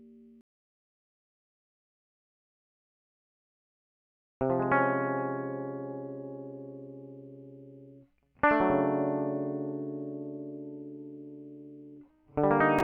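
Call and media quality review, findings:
No technical faults were found in the music signal, and no defect in any part of the chain can be heard.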